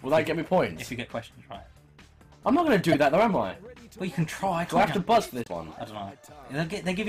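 Right at the start, from 0.13 to 0.63 s, there's hard clipping: the level is pushed about 5 dB past what some stage in the chain can pass, so the peaks get sliced flat. Those squared-off tops throw harmonics way up the spectrum, so loud moments pick up a gritty, crackly edge. It returns from 2.48 to 3.40 s at about 6 dB over, and again from 4.77 to 5.18 s at about 8 dB. That last stretch is the roughest, with the harshness spreading across more of the sound.

Sitting inside the second clipped stretch, at 2.92 to 2.95 s, is a burst of damaged data in a compressed stream. Some bytes in the encoded stream are wrong, so the decoder can't make sense of those frames, drops sync and hunts for the next valid header. You hear that as a brief glitch. The same thing happens again at 5.42 to 5.48 s, just after the final clipped section.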